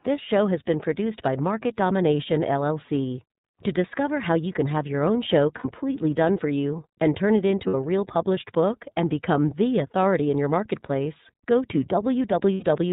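Throughout, the speech sounds narrow and slightly rough and synthetic, with nothing above 4 kHz and plainly audible coding damage. That is the iLBC codec, which codes each frame's excitation independently; the character fits its 13.33 kbps mode with 30 ms frames.

At 5.58 to 5.65 s and 7.67 to 7.75 s, and again at 12.55 to 12.64 s, the speech briefly turns into a held, faintly buzzy vowel. These are lost iLBC frames: the decoder repeated the last pitch cycle mixed with noise across gaps that fit two, two and three missing 30 ms frames. Normal speech returns almost immediately.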